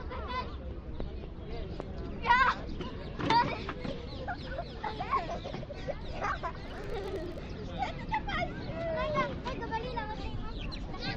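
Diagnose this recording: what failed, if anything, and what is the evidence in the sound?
A filter restarted on every block in the processing stage: from 6.68 to 7.49 s a 50 Hz buzz tracks the sound's level, as the filter starts each block from silence, suggesting 20 ms blocks.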